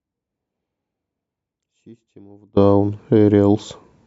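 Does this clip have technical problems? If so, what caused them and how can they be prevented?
Yes. From the very start until 2.57 s the speech sits far down, a faint leak roughly 30 dB below its normal level, then snaps back abruptly rather than fading in. This is an audio dropout to a faint residue, already under way when the clip begins. The likely cause is a break in the wanted signal while the path after it stayed live, passing only a trace. Securing connections and monitoring input levels before recording prevents it.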